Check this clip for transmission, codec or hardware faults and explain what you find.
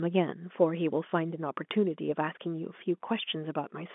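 One transmission fault stands out in the speech, set against narrowband telephone audio carried in G.711 coding, which caps the sound near 3.5 kHz.

Packet loss with last packet repeated, 1.10 to 1.12 s: about 20 ms of audio went missing, which fits a single lost packet, and the receiver filled the gap by replaying the previous packet. The repeat is heard as a brief, small blip.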